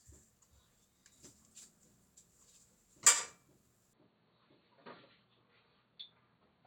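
At 3.93 s the sound turns dull and boxy, with nothing above 4.4 kHz, and drops about 5 dB. Faint new background noise appears. This is likely an input switched to a poorer device.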